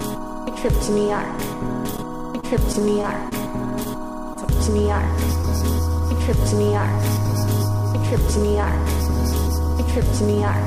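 Between 2.40 and 3.34 s, packets kept going missing or arriving late, producing repeated packet loss. The receiver patched six gaps, the longest 25 ms, by extending the preceding sound. About 40 ms of audio is lost outright, and the stretch turns choppy, with pieces missing.

At 3.84 to 3.87 s, a late packet left the jitter buffer empty, causing a short stall. The last sound was held for 18 ms until the packet arrived, so nothing is lost, but a sound lingers with a slight buzz or dip.

At 4.33 to 4.37 s and again at 5.41 to 5.45 s, a short concealed packet loss occurs, with 20 ms each time never reaching the decoder in time. The filled-in continuation blends back into the audio as a brief smear or wobble.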